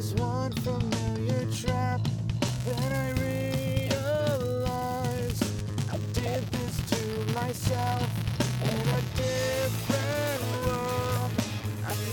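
Buffer tearing from 2.47 s to the end: writer and reader have slipped, splicing a sliver of audio about a hundredth of a second old into each period, giving a steady 200 Hz rattle.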